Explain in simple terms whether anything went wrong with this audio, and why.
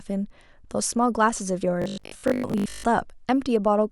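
From 1.82 to 2.86 s the speech turns into a robotic buzz at 50 Hz. That's robotic sound from repeated short buffers, likely from snippets about 20 ms long being replayed for most of that stretch.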